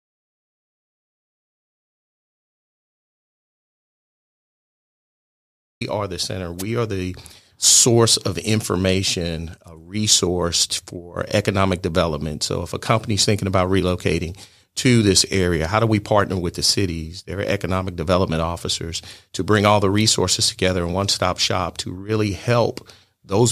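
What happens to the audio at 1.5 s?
At 1.5 s the clip is in an audio dropout to silence that is already under way when the recording begins and lasts until 5.81 s. The gap is silent, with no room tone or noise floor, and the speech then starts abruptly mid-flow. The likely cause is an input that was disconnected or muted while the recorder kept writing empty samples, so nothing spoken during that span was captured.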